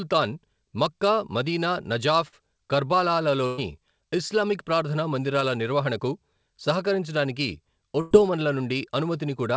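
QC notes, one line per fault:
2.28–2.34 s and 5.40–5.43 s, short concealed packet loss: about 40 ms lost after "మక్కా మదీనా", then 20 ms before "నిర్వహణకు సహకరించడానికి". Both gaps were patched by extending the last sound, which gives only a brief smear rather than a held tone.
3.46–3.60 s and 8.01–8.13 s, burst of packet loss: about 120 ms, then 100 ms after "నిర్వహణకు సహకరించడానికి", were lost. The concealment stretches into a fading buzz or hiss, and speech then resumes with a section skipped.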